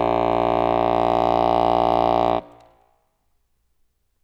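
From 0.62 to 2.32 s the music goes into hard clipping. Peaks overshoot a stage's limit by about 2 dB and are cut flat, giving brief crackle on the loudest moments. Unlike soft saturation's gentle rounding, the flat tops add harsh, high harmonics.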